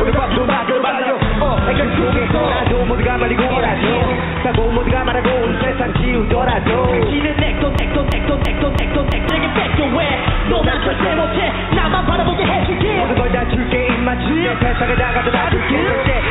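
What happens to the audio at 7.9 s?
A broken-record loop runs from 7.79 s to 9.29 s: a fragment of about a third of a second (333 ms) repeats five times back to back, identical each time. The likely cause is a stall in the player or stream, which kept sending the last piece of audio it held instead of new material, so whatever should have played across those 1.5 seconds is gone. The repeats carry the same 4 kHz band limit as the rest of the call-path audio.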